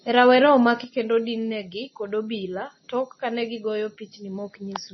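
From the start, the speech has heavy MP3 compression artefacts: nothing above 5.9 kHz, with a watery, swirling texture that fits a very low bitrate of about 24 kbps. At 0.84 s a sudden gain jump drops speech and background together by about 6 dB for the rest of the clip, likely an unramped digital gain change.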